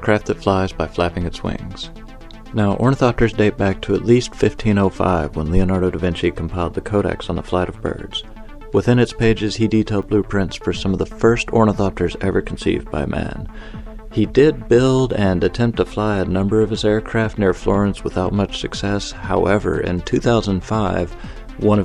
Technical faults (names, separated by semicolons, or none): block of digital silence